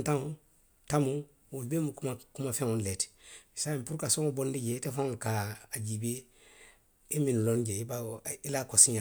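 Listening to this speech recording, nothing technical stood out.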